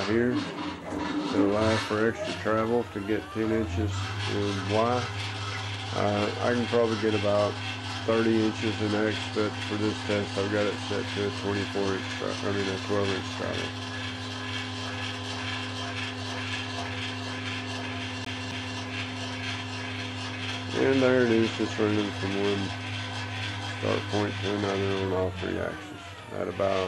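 At 18.25 s the sound stutters, a slice of about 0.27 s playing twice with a brief mute at each jump, until 18.78 s. This is a CD stuck on one turn: a scratch keeps throwing the laser back one track at the same spot.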